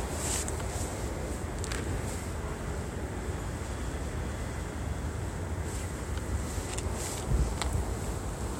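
No technical faults can be heard anywhere in the audio.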